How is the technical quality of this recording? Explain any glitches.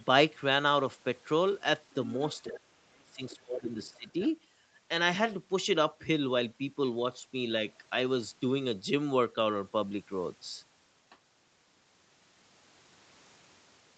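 The recording has a short troubled stretch between 2.47 and 4.29 s, with two faults tied to echo cancellation. The audio stops at 8 kHz throughout, which fits a wideband Opus call path.

Other side's voice leaking through appears in three short bursts: 2.47 to 2.6 s, 3.29 to 3.42 s, and 3.85 to 4.29 s. A faint second voice sits about 25 dB below the main talker. It comes in scraps, not as a continuous stream. The likely cause is a loudspeaker on the talker's device playing the far end. The echo canceller did not fully remove that sound from the microphone signal.

Speech suppressed in double talk runs from 2.49 to 4.24 s, overlapping the leaks. The main voice sinks sharply, by around 35 dB at its deepest. About one and a half seconds of that span are affected. The talker seems to fade while the other voice is present. The likely cause is both sides talking at once. Unable to separate the two, the echo canceller turned everything down, including the talker.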